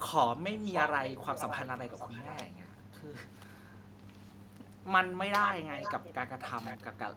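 Echo leak at 0.55 to 2.45, 5.42 to 5.54, 5.71 to 6.14 and 6.40 to 6.84 s: a distinct, quieter copy trailing by 569 ms, then 486 ms, not reverb's smooth tail, likely an incomplete far-end echo canceller.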